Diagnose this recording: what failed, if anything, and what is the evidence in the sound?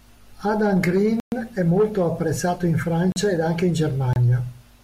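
Blocks of digital silence at 1.20–1.32 s (120 ms), before "è molto apprezzato in"; 3.12–3.16 s (40 ms), before "ed anche in"; and 4.13–4.16 s (27 ms). The speech drops abruptly to silence and returns with no fade. This is likely a driver or buffer underrun: output wasn't filled in time.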